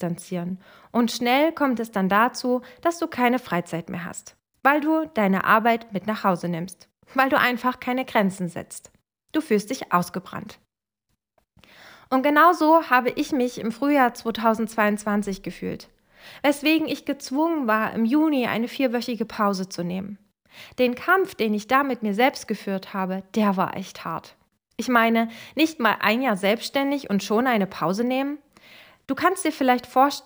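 Throughout the speech there is crude rate conversion: the rate was raised by 1.5, consistent with 32 kHz to 48 kHz, by repeating nearest samples without filtering. The error, roughly 25 dB below the signal, adds a gritty, inharmonic fizz tracking loud, high sounds.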